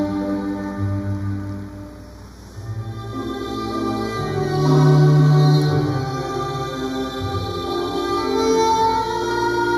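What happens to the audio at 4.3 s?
At 4.3 s the sound is hollow and phasey, with a fixed notch around 3 kHz. This is channel delay (comb filtering): one channel lags the other by about a fifth of a millisecond, so summing them cancels evenly spaced frequencies throughout the clip.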